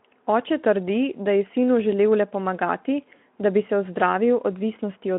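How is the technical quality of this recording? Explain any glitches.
Nothing here counts as a glitch: the speech comes over a narrow phone-style band of roughly 200 Hz to 3.4 kHz, with nothing above about 3.8 kHz, which is just what a Speex link at around 15 kbps sounds like when it's working as intended.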